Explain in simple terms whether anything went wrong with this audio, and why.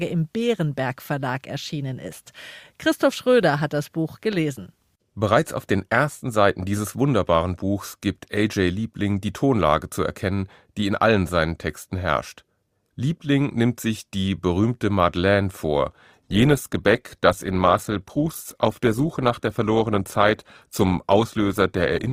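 Something does go wrong near the end. At 16.10 s the speech suddenly gets worse: a smeary, processed texture creeps in until the clip ends. This is an adaptive stream at a lower bitrate. The player switched to a cheaper, lower-quality copy of the audio, most plausibly because the connection slowed. Unlike a dropout, nothing goes silent or skips. The quality just steps down at once and stays down.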